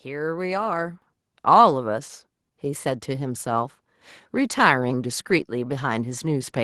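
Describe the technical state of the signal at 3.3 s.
At 3.3 s the signal is intact, with no dropouts, clipping, glitches or other technical faults audible at that point.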